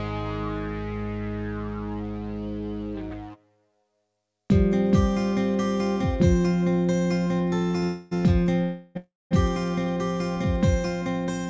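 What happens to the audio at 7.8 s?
At 7.77 s a short stall from a late packet begins. A packet arrived late and the jitter buffer ran dry. The receiver held the last sound for about 46 ms, to 7.84 s, giving a brief stretched buzz. Nothing is lost.

A call audio freeze follows straight on, from 7.84 s to 8.13 s. The last sound keeps going as a fading buzz for about 273 ms and never drops to silence. Packets held up in transit are the likely cause. The audio then resumes where it stopped, so it runs about 0.3 s late.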